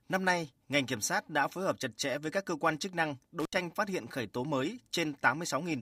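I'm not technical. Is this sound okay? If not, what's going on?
No. From 3.40 to 3.58 s, just after "cơ quan chức năng", there's an intermittent contact. A loose cable briefly opens, so the sound cuts out and crackles before "phát hiện khởi tố".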